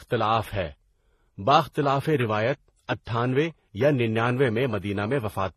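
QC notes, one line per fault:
Throughout, transcoding between lossy codecs: the speech carries two layers of coding damage at once, a smeared, watery texture with swirling highs typical of a very low-rate HE-AAC pass, then a second grainy, pre-echo-prone layer typical of a low-rate MP3. The likely cause is an HE-AAC encode near 16 kbit/s re-encoded to MP3 near 40 kbit/s, the second coder wasting bits on the first one's artefacts. Nothing survives above 12.3 kHz.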